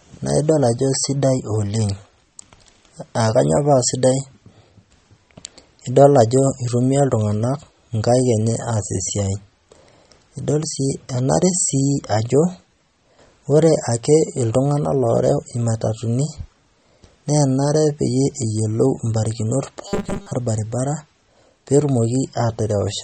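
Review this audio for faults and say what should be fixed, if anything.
MP3 compression, throughout: watery, swirling artefacts are plainly audible, which fits a low bitrate around 32 kbps. Re-encode from the original source at a higher bitrate or in a lossless format.

Robotic sound from repeated short buffers, 19.88 to 20.32 s, just after "eyolou imbarakinot": a rigid 200 Hz buzz replaces most of the sound, likely from a 5 ms buffer being replayed while incoming audio is skipped. Give the capture or playback path larger buffers or more scheduling headroom so new audio always arrives in time.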